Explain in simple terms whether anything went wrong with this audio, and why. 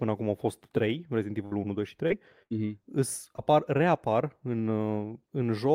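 Two kinds of network dropout affect this speech.

A burst of packet loss at 1.45–1.53 s and 2.43–2.53 s: the last sound is held and fades, then speech jumps ahead, skipping a piece.

Short concealed packet loss at 2.07–2.14 s and twice in a row at 3.33–3.40 s, just before "reapar în", is a brief smear.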